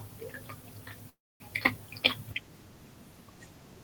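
At 1.09 s the speech halts. The last sound fades as a buzz or hiss, then silence until 1.43 s. This is a call audio freeze, likely from delayed packets draining the jitter buffer. The speech resumes where it stopped, about 0.31 s later, with nothing lost.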